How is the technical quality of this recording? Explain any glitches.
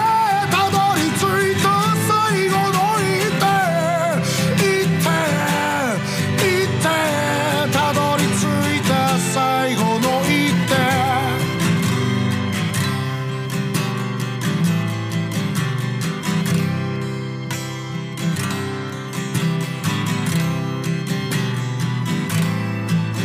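No glitches or technical faults are audible anywhere in the recording, so there is nothing to explain.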